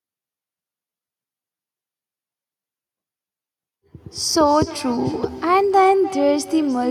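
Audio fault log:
4.23 to 6.91 s, feedback echo between two devices: a second device replays the sound into the mic, so it comes back roughly every third of a second, peaking about 13 dB under the speech.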